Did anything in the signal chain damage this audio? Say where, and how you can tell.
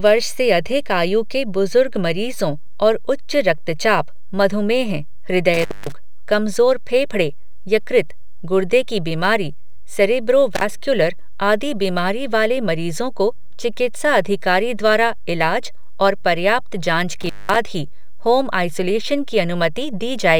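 Yes. An intermittent contact in the analogue wiring, a loose cable or plug, opens three times. The speech cuts out with crackle at each edge, leaving faint hiss while the line is open. At 5.54 to 5.92 s it is open about 220 ms, just before "कमजोर फेफड़े यकृत गुर्दे". At 10.55 to 10.63 s it is open about 46 ms, right after "गुर्दे की बीमारी सेरेब्रो". At 17.21 to 17.56 s it is open about 197 ms, between "इलाज और पर्याप्त जांच" and "ही होम आइसोलेशन की".

A DC offset runs through the whole clip, most likely from the analogue front end or the converter. A constant shift pushes the entire waveform off zero. You cannot hear it as a sound, but it shows as steady energy at the very bottom of the spectrum. Because the waveform sits off-centre, peaks on one side reach full scale sooner, so the shift uses up headroom that the speech itself should have had.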